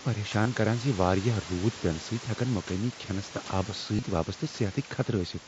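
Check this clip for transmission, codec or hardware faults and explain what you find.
Two short dropouts are audible, both concealed Bluetooth headset packet loss. At 0.43 to 0.46 s, about 22.5 ms of headset audio went missing, and around 3.96 to 4.03 s about 45 ms was lost in pieces across 60 ms, the longest run 22.5 ms. The receiver bridged each gap by repeating the best-matching recent stretch of waveform, so the sound briefly turns into a held, buzzy tone, with a slight warble as the real signal resumes.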